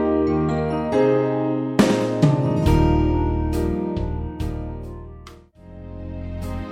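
No technical fault can be heard anywhere in the audio, with the signal level, continuity and timing all holding steady throughout.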